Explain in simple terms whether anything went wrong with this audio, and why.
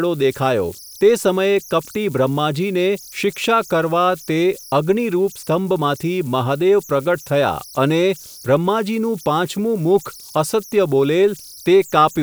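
Throughout the whole speech clip there are converter idle tones: a high whistle somewhere around 5 kHz that shows up in the pauses and turns into a grainy fizz under the quieter parts of the speech. It happens because the recording chip, working without added dither, slips into repeating patterns when the sound is very quiet. Unlike steady mains hum or plain hiss, this whistle is high-pitched and tonal, and it can drift or chirp.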